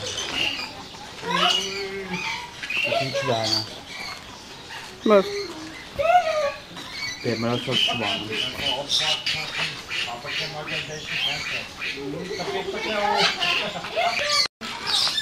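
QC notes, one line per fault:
9.26 s, 11.86 s, 13.84 s: compressed frames skipped. The audio jumps forward at each point, losing about a fifth of a second at 9.26 s, only a few tens of milliseconds at 11.86 s, and about 150 ms at 13.84 s. These gaps fit whole 32 ms frames dropped by the decoder. Nothing is repeated or padded with silence, which separates this from a dropout or a glitch.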